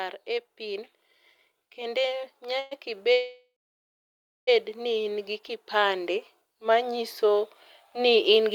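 From 1.75 s to the end, automatic gain rising: the gain control judged the input too quiet and kept turning it up, so the speech and its background swell together, growing steadily louder over several seconds. From 2.59 s to 2.73 s, and again from 3.13 s to 4.49 s, comes a call audio freeze, likely from delayed packets emptying the jitter buffer. The first time, the last sound is drawn out into a fading buzz or hiss for about 0.12 s. The second time, the fill lasts 1.35 s and ends in about a second of silence. Each time the speech resumes exactly where it stopped, with nothing lost, just pushed later.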